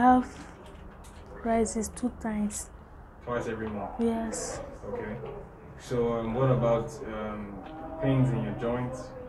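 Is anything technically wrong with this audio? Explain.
No, no technical faults detected.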